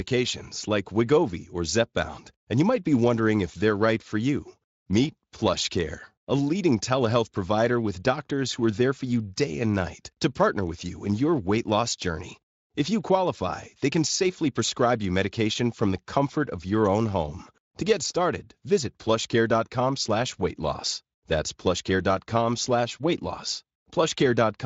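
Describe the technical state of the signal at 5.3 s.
At 5.3 s the speech comes through intact, with no dropout, distortion or other fault at that point.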